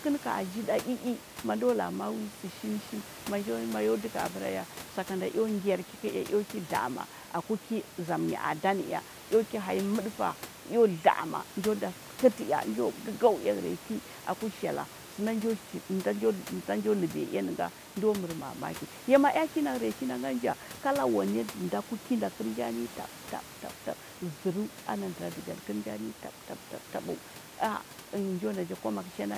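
No technical faults are audible.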